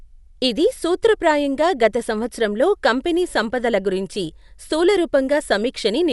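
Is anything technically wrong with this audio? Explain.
Yes. Throughout the speech, the sound is dull and nothing reaches above 11.5 kHz, and a rough, fluttering noise clings around tonal parts, plainly audible the whole way. This is likely Dolby Digital compression at a low bitrate, which fits something around 64 kbps. Short of bits, the encoder narrowed the band and left many frequency lines without mantissa data, so the decoder filled those gaps with dither noise, giving the grainy, wavering texture.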